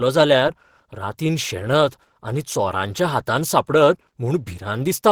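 Opus compression runs throughout the speech, plainly audible as a hoarse, grainy roughness. The likely cause is Opus's hybrid mode at a low rate, one that fits about 16 kbps, where bits run short. The band stays full width up to about 20.4 kHz.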